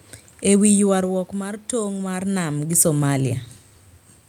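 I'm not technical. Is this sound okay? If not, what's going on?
Yes, there are no faults: the background noise is simply the room the microphone is in, and the changes in loudness around half a second in and again near 2 seconds are the talker moving relative to the microphone, not a problem with the system.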